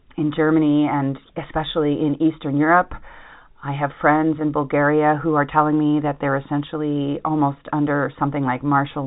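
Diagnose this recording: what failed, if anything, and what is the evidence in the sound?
Nothing in the recording points to a failure at any stage. The speech comes through G.711 telephone coding, working as intended, with the band stopping at about 3.8 kHz as expected for a fixed-line telephone path.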